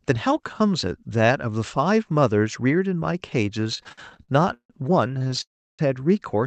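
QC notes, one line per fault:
3.61–4.72 s and 5.08–5.42 s, repeated stalls (stutter): the jitter buffer kept running dry, so the receiver held the last sound over 19 gaps (420 ms added, longest 159 ms), then 10 gaps of at most 16 ms (102 ms added). Nothing is lost, but the sound drags and judders. On a spectrogram, harmonic bands smear flat in short stretches; the waveform shows repeated, fading copies of one cycle.
5.42–5.81 s, call audio freeze: a 369 ms hold, likely from packets delayed in transit emptying the buffer. The last sound continues briefly as a decaying buzz or hiss, then about 330 ms of near-silence before the audio resumes where it stopped. On the waveform this is a tapering tail into a flat line, and on the spectrogram a blank vertical band.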